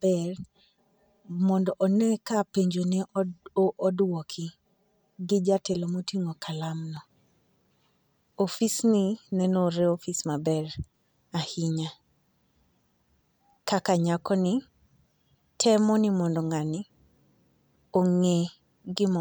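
Speech, with channel delay (comb filtering) from 0.0 to 6.97 s: one channel arrives roughly 5 ms late, and summing to mono cancels shared content at evenly spaced frequencies, the first notch near 100 Hz. The result sounds hollow and phasey until the channels realign.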